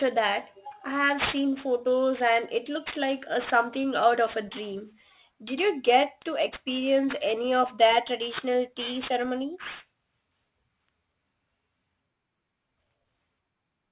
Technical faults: aliasing

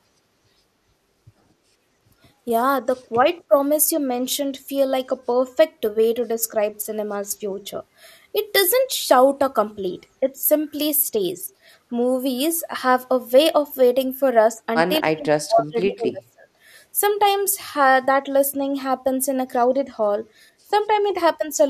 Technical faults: speech suppressed in double talk

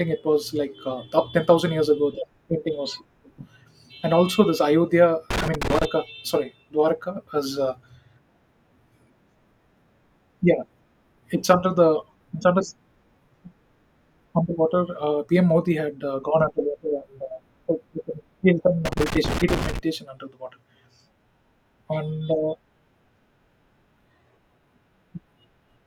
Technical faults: loose connector crackle

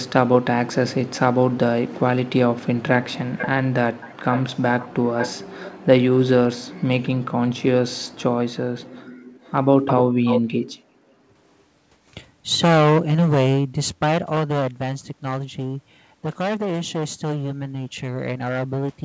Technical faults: echo leak; background gated by the echo canceller

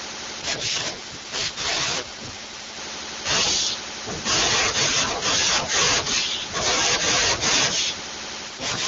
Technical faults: AMR rate drop

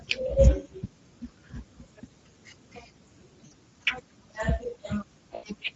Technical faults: Speex codec; VoIP packet loss concealed by the speech codec

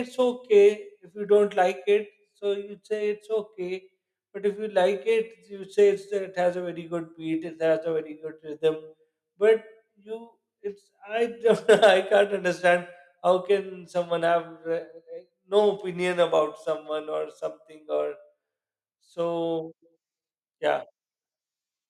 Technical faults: microphone overload

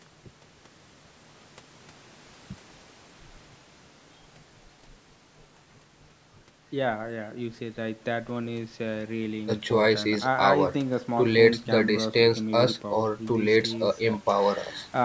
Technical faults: none

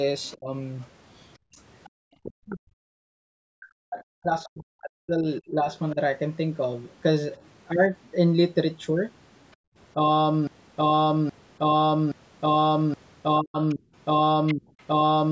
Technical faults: other side's voice leaking through; speech suppressed in double talk; background gated by the echo canceller; broken-record loop

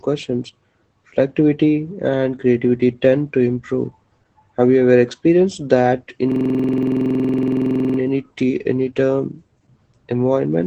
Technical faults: Opus voice compression; system hang loop

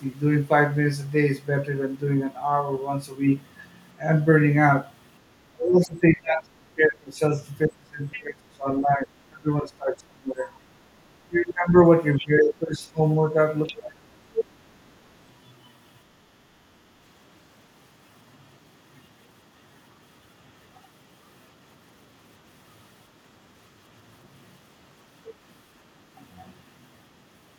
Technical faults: speech suppressed in double talk; other side's voice leaking through

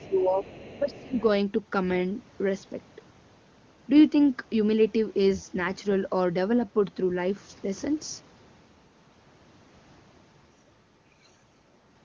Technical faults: speech suppressed in double talk; other side's voice leaking through

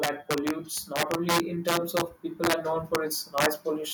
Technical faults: integer overflow; automatic gain rising

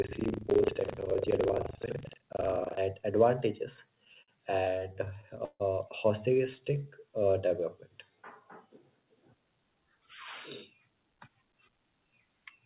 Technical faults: buffer tearing; repeated stalls (stutter); jitter buffer slow-down; jitter buffer speed-up

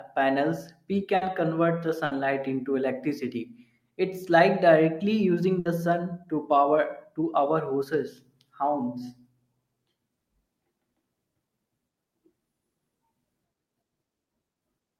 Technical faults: burst of packet loss

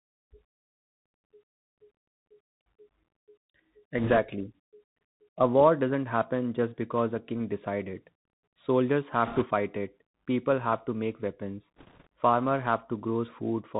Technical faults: Bluetooth CVSD headset codec; bit errors on a Bluetooth voice link

